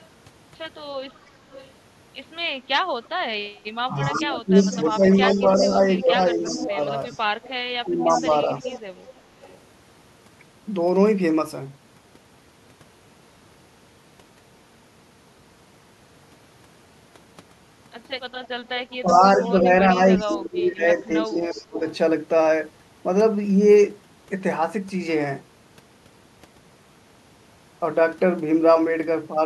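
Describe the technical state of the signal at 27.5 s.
At 27.5 s the speech signal is intact, with no audible technical fault at that moment.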